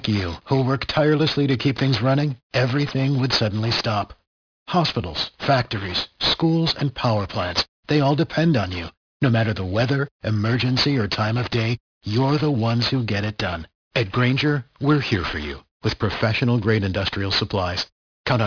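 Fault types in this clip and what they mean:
Aliasing: the audio was brought down to a much lower sample rate, one that fits about 11 kHz, without first removing content above half that rate. Everything above 5.5 kHz folds back below it as unrelated tones, so sibilants in the speech sound gritty and metallic throughout. The folded energy sits roughly 10 dB below the signal. On a spectrogram, mirrored streaks run downward from a hard edge at 5.5 kHz.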